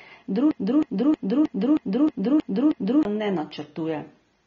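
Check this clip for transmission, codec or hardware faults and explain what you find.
There are two problems here, one running through the whole clip and one in the first few seconds.

AAC compression affects the whole clip, and the damage is plainly audible. The speech sounds dull and smeared, with nothing above 7.6 kHz. That's an AAC-LC encoder at a low bitrate, likely around 24 kbps, cutting the top band and coarsely quantising the rest.

A broken-record loop runs from 0.51 to 3.05 s. The same 315 ms fragment repeats eight times back to back. That's likely a stall in the player, encoder or stream that kept resending its last chunk, so whatever should have played there is lost.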